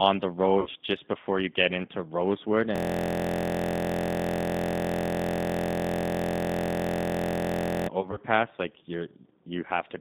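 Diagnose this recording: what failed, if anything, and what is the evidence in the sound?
The whole call went through the G.729 codec, probably the G.729A variant at 8 kbit/s. You can hear it across all of it: the band is trimmed to roughly 150 Hz to 3.7 kHz, and the speech has that plainly audible rough, slightly synthetic edge. That comes from the decoder rebuilding each 10 ms frame from a filter, a pitch predictor and a few pulses rather than the actual waveform.

There are two spots of VoIP packet loss concealed by the speech codec, which is a network problem covered up by the decoder. The first runs from 0.60 to 0.69 s, right before "just before you get". About 60 ms goes missing, which fits three 20 ms packets. The decoder extrapolates from its last frame, so you get a short stretched, fading smear, and the recovery sounds a bit weak afterwards. The second is 8.01 to 8.19 s, where 60 ms is lost in scattered 20 ms gaps across about 160 ms.

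The big one is a system hang loop, which is a driver or buffer failure on the machine. From 2.76 to 7.89 s a single 23.22 ms slice of audio repeats exactly, over two hundred times. That length fits a 1024-sample buffer. With a slice that short, it comes across as a steady buzz at about 43.1 Hz instead of a stutter. The host stalled while the sound hardware kept cycling the same ring buffer for roughly five seconds.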